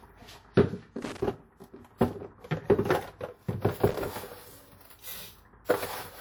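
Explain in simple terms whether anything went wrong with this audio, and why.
Two short bursts of crackling and scratching break into the sound, from 1.02 to 1.22 s and again from 3.88 to 3.94 s. This is loose connector crackle. Somewhere in the cable chain a worn or dirty contact shifted and kept connecting and disconnecting very quickly. Each time the contact broke, the signal was chopped off. Any steady voltage sitting on the line turned into small pops, and together these produce the irregular crackle you hear.

Near the end, at about 5.65 s, a quick hiss arrives just ahead of a sharp sound, and the start of that sound comes across softened or smeared. This is pre-echo, and it lasts about 39 ms, up to 5.69 s. Some audio compression handles sound in small blocks of time and spreads its added noise across the whole block. Because the sudden sound fell late in its block, noise meant to be masked by that loud moment leaked into the quiet stretch just before it.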